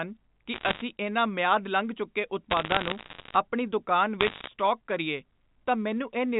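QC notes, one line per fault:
0.54–0.82 s, 2.50–3.36 s, 4.20–4.48 s: bit errors on a digital phone line. Bursts of sharp ticks crackle over the band-limited telephone speech at roughly a 0.7 to 1 percent error rate. Each flipped sign or high bit knocks one 8-bit sample far off.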